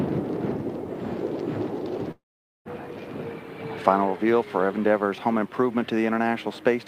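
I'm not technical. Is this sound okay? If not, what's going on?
No. From 2.11 to 2.68 s there is a long network dropout: the audio likely stopped arriving for about half a second. The receiver kept the last bit of sound going as a buzz that fades away in under a tenth of a second, leaving near-silence. The sound then picks up again at 2.68 s, but the stretch that never arrived is simply missing, so it jumps ahead rather than continuing smoothly.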